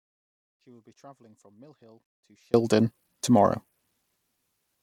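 From the start of the speech until 2.54 s, an audio dropout to a faint residue is already under way: only a faint leak of sound remains, around 35 dB below normal level. The signal likely dropped out upstream while the path stayed live, and full level returns abruptly.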